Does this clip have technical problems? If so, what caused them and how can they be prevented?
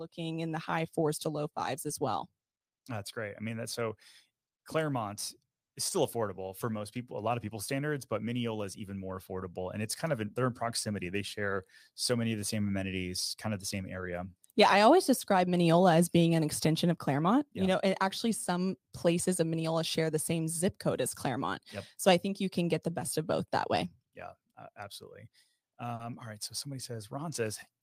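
Yes. There is short concealed packet loss twice. The first is at 1.87 to 1.91 s, just after "fours to low fives". The second is at 25.95 to 26.01 s, just before "all right". Audio packets arrived too late for the decoder. The receiver bridged each gap by extending the preceding sound, about 20 ms in the first case and 40 ms in the second, and then blended back. Each gap is heard as a brief smear. A steadier network path with a larger jitter buffer would prevent it.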